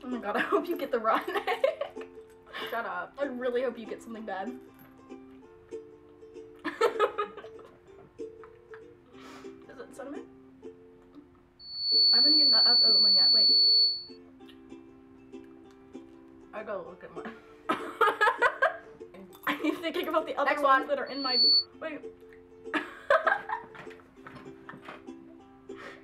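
At 11.59 s a loudspeaker feedback squeal starts. A microphone is picking up the loudspeaker it feeds, and at 4.4 kHz the loop gain rises above one. That tone feeds on itself. It swells over a bit under half a second into a piercing whistle, about 10 dB louder than the sound around it, and holds until 14.18 s. The same 4.4 kHz squeal returns from 21.06 s to 21.66 s, building just as fast.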